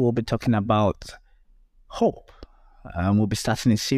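Nothing in the speech recording stood out as a technical problem on listening.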